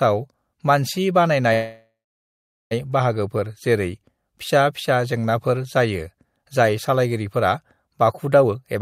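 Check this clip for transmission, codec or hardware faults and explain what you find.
Two faults are audible in this speech clip: a call audio freeze and, near the end, a jitter buffer speed-up.

From 1.53 s to 2.73 s the audio stalls in a call audio freeze. The stall is most likely caused by packets held up in transit, which leaves the jitter buffer empty. The receiver extends the last sound as a decaying buzz, then goes silent for about 0.77 s of the 1.18 s filled. When the audio resumes it picks up where it stopped with nothing lost, but it now runs 1.18 s later than before.

From 8.43 s to 8.81 s the jitter buffer speed-up is heard. The buffer is holding more audio than its target, and the receiver trims it by cutting many short, pitch-period-sized slices in quick succession. In total it removes about a tenth of a second. Playback runs at 129% of normal speed while the pitch stays unchanged, so this final stretch of speech sounds rushed.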